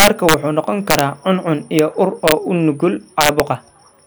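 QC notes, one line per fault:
0.00–0.34, 0.90–1.00, 1.79, 2.28–2.32 and 3.21–3.40 s: integer overflow. Loud speech peaks pushed the sample values past the top of the integer range, and instead of being held at the limit they wrapped around to the opposite extreme. Each overshooting peak jumps across the full scale, heard as violent cracks far harsher than clipping. They are strongest at the start, overdriven by about 6 dB, then about 4, 0, 1 and 2 dB.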